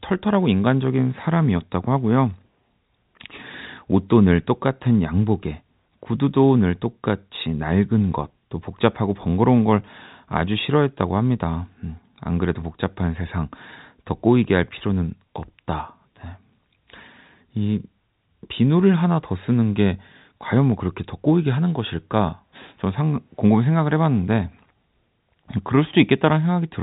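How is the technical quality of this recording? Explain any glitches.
No glitches can be heard in the recording; it carries the narrow band of ordinary telephone coding, with nothing above about 3.8 kHz.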